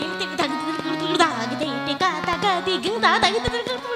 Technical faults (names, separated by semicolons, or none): loud pop